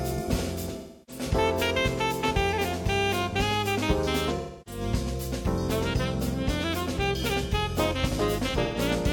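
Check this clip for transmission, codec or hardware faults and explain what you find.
The clip has one fault, AAC frame loss with concealment, occurring three times. From 0.78 to 1.23 s and again from 4.36 to 4.81 s the sound turns smeared and noisy, a hazy, phasey wash for roughly 300 ms, which points to about seven consecutive frames dropping out. A shorter patch follows at 8.63 to 8.79 s, about 128 ms, suggesting around three frames. In each gap the decoder rebuilt audio from the last good spectrum, randomising signs and interpolating energy instead of muting.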